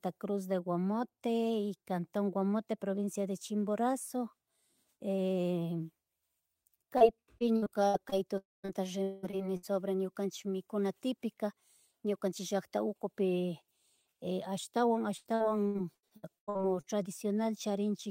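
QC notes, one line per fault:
6.97–7.03 s, short concealed packet loss: a brief smear where about 40 ms never arrived, so the decoder stretched the preceding sound across the hole and blended back.
7.39–8.14 s, repeated packet loss (robotic sound): choppy stretch, five gaps totalling 180 ms (longest 59 ms), each patched by repeating the last sound before the next loss.
8.38–8.65 s, long network dropout: the sound turns to a fading buzz or hiss, then about 0.19 s of silence. This is likely a network outage that dropped about 0.26 s of audio.
8.65–9.65 s, repeated packet loss (robotic sound): robotic, broken-up audio as six losses totalling 340 ms (one of 196 ms) are filled with synthetic continuation, about a third of the span.
15.17–16.85 s, repeated packet loss (robotic sound): prolonged choppy sound, ten gaps totalling 560 ms (longest 88 ms) concealed, covering about a third of this stretch.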